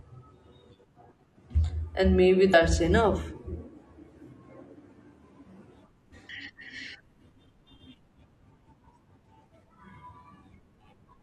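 At 2.50 to 2.54 s and again at 6.25 to 6.30 s, the speech is interrupted by damaged data in a compressed stream. Each time, corrupt bytes make the decoder misread frames and lose sync until it finds a valid header, producing a brief glitch about 40 ms long. On a spectrogram, each shows as a narrow vertical disruption, and the waveform breaks up briefly.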